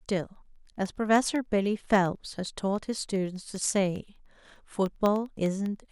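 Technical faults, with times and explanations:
0.06 to 5.86 s: periodic USB or driver dropouts. Every 0.1 s, a sliver of audio, a tiny fraction of a millisecond, is blanked to silence as the bus or driver stalls. Several dozen evenly spaced gaps sound as a steady ten-per-second ticking under the speech.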